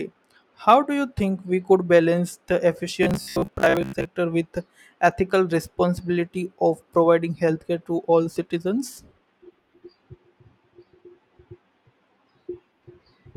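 A speech clip in which, just after "we could balance the", the voice collapses into robotic sound from repeated short buffers between 3.03 and 4.11 s: a rigid, metallic buzz near 66.8 Hz that only loosely tracks the speech. The likely cause is audio arriving too slowly, so roughly half the time is filled by looping a fragment about 15 ms long. A spectrogram would show evenly spaced harmonic stripes at multiples of 66.8 Hz, and the waveform would show one identical segment repeating every 15 ms.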